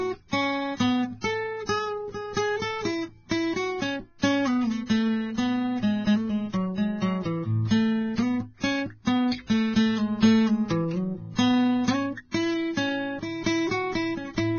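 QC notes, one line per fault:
Throughout, Vorbis compression: the music sounds hissy and grainy, with roughened tones and smeared attacks, likely from heavy Vorbis coding at a very low rate, around 15 kbps. A spectrogram shows a hard ceiling at 6.5 kHz and speckled, noisy treble beneath it.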